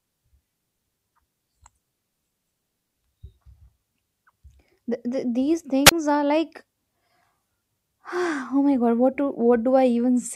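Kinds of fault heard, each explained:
Wireless microphone squelch dropout: the analogue FM radio link fades far enough that the receiver's squelch mutes its output. Between 5.85 and 5.92 s the speech gives way to a brief rise of hiss, then a 25 ms hole of near silence, before the voice returns.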